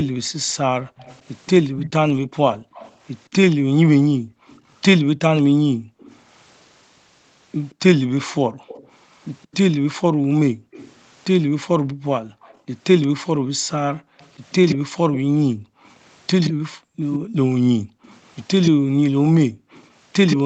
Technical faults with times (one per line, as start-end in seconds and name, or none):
0.08-0.97 background gated by the echo canceller
0.97-6.19 echo leak
2.53-5.99 background gated by the echo canceller
7.70-20.37 echo leak
8.46-19.72 background gated by the echo canceller